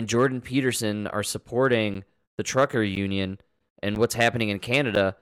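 From about 1.94 s to 4.96 s the speech picks up a steady tick roughly once a second, about four times in all. These are periodic USB or driver dropouts: something in the background is stalling the USB bus or audio driver on a fixed one-second cycle, and each time roughly 10 ms of audio goes missing and is filled with silence. Because the gap cuts the signal mid-waveform, each one comes across as a small click or pop in the speech.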